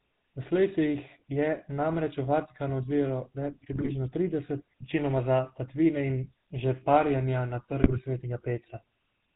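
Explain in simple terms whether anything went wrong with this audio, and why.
The whole recording sounds buzzy and gravelly, with no crisp top end. That's the GSM full-rate codec, an old mobile-phone system that rebuilds the voice from a rough model and drops everything above 4 kHz. At 3.73 to 3.91 s and again at 7.82 to 7.98 s the speech briefly breaks into squawks and gargling. These are GSM bit errors: damaged data on a weak phone link scrambled the decoder's settings for a moment.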